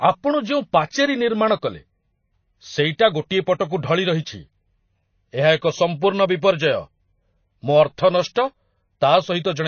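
The whole clip has MP3 compression damage, likely from a low-bitrate encode near 24 kbps. Nothing sounds above 6.6 kHz, and the speech has a plainly audible watery swirl. At 5.56 to 5.62 s there is pre-echo. A short hiss spreads about 54 ms ahead of a sharp attack, and the onset sounds smeared.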